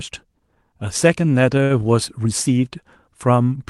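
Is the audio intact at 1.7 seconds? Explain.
No, not quite. From 1.63 to 1.72 s there's a short stall from a late packet. The jitter buffer ran dry, so the receiver stretched the last sound by about 66 ms until the packet turned up. Nothing's lost, but that sound hangs on with a faint buzz or dip.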